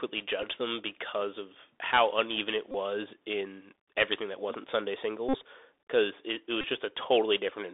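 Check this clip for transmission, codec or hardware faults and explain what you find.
Two faults are present. The speech passed through a Bluetooth CVSD headset codec throughout. Bluetooth headset packet repeats occur four times.

Throughout, the Bluetooth CVSD headset codec limits the band to roughly 300 Hz to 3.6 kHz. Its one-bit adaptive steps leave scratchy s sounds and a granular hiss.

Bluetooth headset packet repeats occur at 0.42 s, 2.72 to 2.75 s, 5.29 to 5.36 s, and 6.61 to 6.65 s. Lost packets were replaced by replaying old bits. The result is a brief buzzy tick, longest at 5.29 s.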